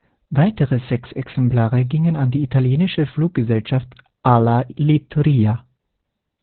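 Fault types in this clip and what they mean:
Opus voice compression: low-bitrate SILK narrowband coding, likely around 8 kbps, leaves speech muffled, hoarse and robotic; spectrogram shows nothing above about 4.4 kHz, coarse smeared harmonics.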